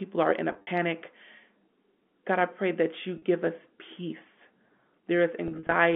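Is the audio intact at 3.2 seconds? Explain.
No. Between 3.18 and 3.22 s, just after "I pray that you" and before "us peace", the sound briefly holds on a slightly buzzy, frozen tone. This is packet loss with pitch repetition: about 40 ms of audio went missing, and the receiver filled the gap by repeating the last pitch period.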